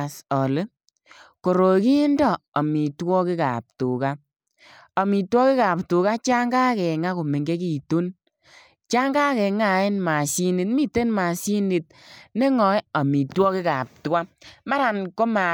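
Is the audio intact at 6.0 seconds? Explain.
Yes, the speech at 6.0 seconds is intact, with no audible fault at that moment.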